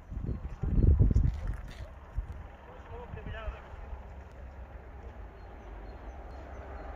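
Overlap between stream segments, repeating on a 2 s segment grid, makes the player trim sound that was never doubled, leaving tiny skips at 2.32, 4.32 and 6.31 s.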